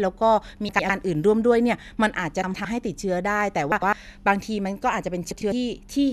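Frames out of order at 0.69–0.90, 2.44–2.65, 3.72–3.93 and 5.31–5.52 s: two roughly 105 ms runs swap places each time, giving a garbled flutter.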